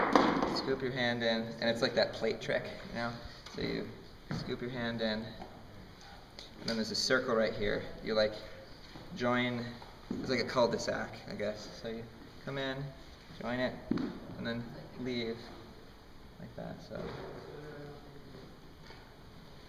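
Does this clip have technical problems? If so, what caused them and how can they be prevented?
Yes. From 10.24 s to the end of the clip there is a block size mismatch (truncated): one processing stage hands over longer blocks than the next stage takes in, and the tail of every block is discarded. Each cut leaves a jump in the waveform at the block boundary, so a buzz at about 46.9 Hz runs under the sound, which fits blocks of 1024 samples. The playback speed itself stays unchanged. To prevent it, configure every stage in the chain to use the same block size, or place a buffer between them.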